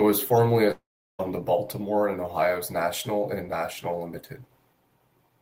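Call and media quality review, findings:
Long network dropout, 0.71–1.21 s. Speech cuts out; last sound stretched into fading buzz, then about 370 ms near-silence. Resumes at 1.21 s minus roughly 480 ms of content. Likely jitter-buffer underrun from packet loss, concealment exhausted.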